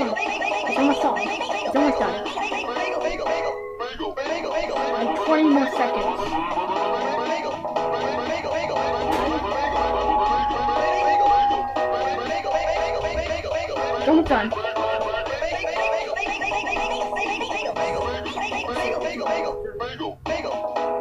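No technical faults are audible.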